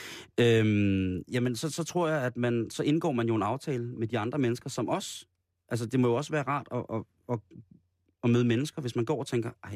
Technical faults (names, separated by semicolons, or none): none